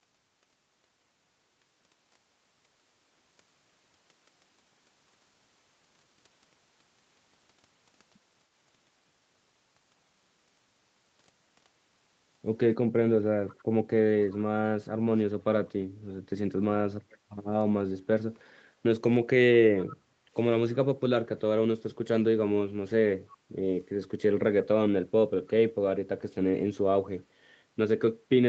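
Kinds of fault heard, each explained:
Echo leak: faint, delayed repeats of the speech, about 330 ms late, in short scraps, likely loudspeaker sound the echo canceller missed; a distinct copy, not reverberant smear.
Background gated by the echo canceller: room sound dips about 9 dB for roughly 0.4 s just after an echo scrap, then recovers. The background ducks, unlike a full dropout.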